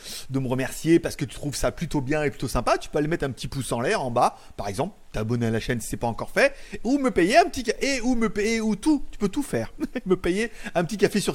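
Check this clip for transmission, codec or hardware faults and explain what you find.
Checking the clip turned up no faults to report.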